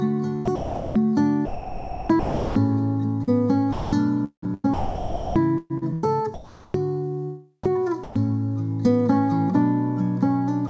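The audio has a hollow, phasey colouring throughout, with a fixed notch near 3 kHz. That is channel delay (comb filtering): one channel runs roughly 0.2 ms late and cancels against the other when summed to mono. It also sounds choppy from 0.45 to 2.55 s (about 1.4 s replaced), 3.23 to 6.74 s (about 1.8 s replaced) and 7.64 to 8.16 s (about 0.14 s replaced). This is likely sound chopped by the voice detector, switching repeatedly and filling gaps with comfort noise. At 10.68 to 10.70 s the final 21 ms gives way to comfort noise, sound dropped by the voice detector, which probably took that tail for background. All of it passes through a call path whose band stops at 8 kHz, consistent with G.722 at 64 kbps.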